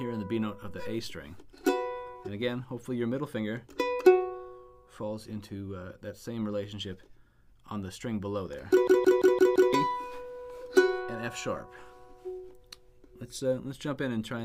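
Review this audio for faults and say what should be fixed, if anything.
A system hang loop runs from 8.88 to 9.73 s. One 170.67 ms slice repeats exactly five times, a machine-gun stutter at 5.86 Hz. This fits an 8192-sample ring buffer cycling while the driver froze, and about a second of audio is lost. Unlike packet-loss stutter, every repeat is sample-identical. Running the audio thread at real-time priority, with a watchdog that mutes a stalled buffer, would prevent it.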